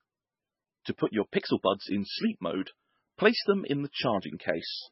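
From start to finish the speech carries heavy damage that's most likely MP3 compression. Everything above 5.6 kHz is simply gone, so the top end sounds dull and boxed in. The encoder was clearly starved of bits, which fits a very low rate of about 16 kbps. It dropped the quieter frequency lines and let them flicker in and out between frames, and that gives the whole thing a watery, swirling texture under the speech.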